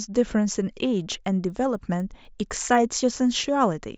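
From 1.0 to 2.75 s the speech picks up a steady tick at 4 Hz, one every 250 ms. That's the resampler restarted on every block: the 16 kHz to 48 kHz conversion ran on each block in isolation, so each edge lacked real neighbouring samples and left a small click.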